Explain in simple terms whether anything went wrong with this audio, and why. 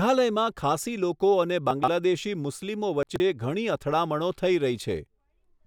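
Yes, twice the speech briefly jumbles, from 1.71 to 1.88 s just after "લોકો અને" and from 3.03 to 3.20 s just before "ઘણી અથડામણો થઈ". These are chunks out of order: a 43 ms piece plays three pieces late. Unlike a dropout, nothing is missing, only scrambled.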